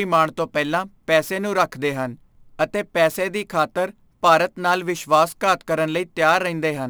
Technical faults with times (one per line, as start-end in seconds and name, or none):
0.00-6.89 crude rate conversion